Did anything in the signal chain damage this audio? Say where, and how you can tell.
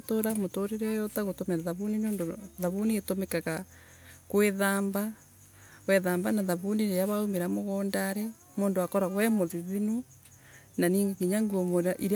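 No, nothing in the signal chain can be heard damaging this speech recording, and the signal stays continuous and intact at every stage that leaves an audible trace.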